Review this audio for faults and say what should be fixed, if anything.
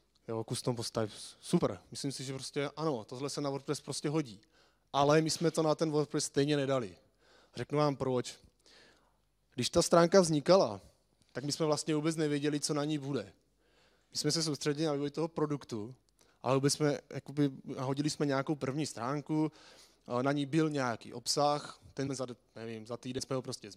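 Compressed frames skipped at 1.58–1.60, 22.06 and 23.18 s. Missing or rejected 23.2 ms frames make the audio jump ahead. Verify file integrity and re-encode from the source.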